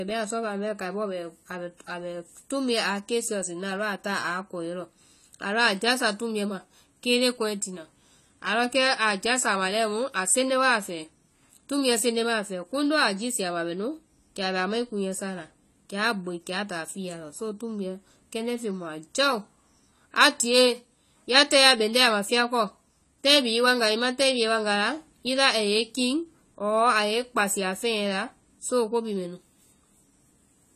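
From start to finish the speech carries plainly audible codec damage, most likely from AAC compression with the AAC-LC coder. Nothing is present above 14 kHz, so the highest frequencies are simply missing and the sound is dull. The encoder quantises each frame's spectrum coarsely against a hearing model, discarding detail it judges inaudible. The depth of that damage fits a low bitrate around 32 kbps, too few bits to code the spectrum cleanly.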